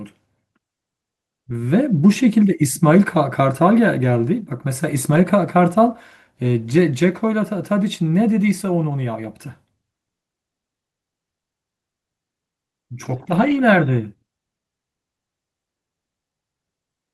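Speech, with two spots of lost packets rebuilt from error correction: a brief rough, noisier patch at 5.11 to 5.17 s and a longer grainy stretch from 13.05 to 13.56 s. There's no gap because the following packets carried low-bitrate copies that the decoder played instead.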